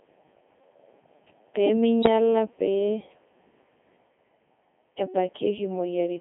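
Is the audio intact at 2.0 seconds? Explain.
No. From 2.02 to 2.08 s there are bit errors on digital voice radio. A small share of flipped bits, around one or two percent, reached the vocoder. Each bit there sets the pitch, level, voicing or spectral envelope of a whole frame, so the synthesised sound jumps abruptly in pitch, loudness and tone colour for that brief span. The result is a short warbling bleep, and its length points to roughly two corrupted frames.

That moment also sits inside the Codec 2 vocoder damage present across the entire clip. The decoder rebuilds the speech from sine waves driven by pitch, voicing, energy and envelope data rather than keeping the waveform. At 2.0 s, as everywhere, the speech sounds robotic and buzzy, with heavy damage. It is confined to a band of about 250 Hz to 3.5 kHz, and the codec runs at its highest rate of 3.2 kbit/s.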